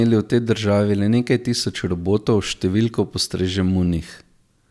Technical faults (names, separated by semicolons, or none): none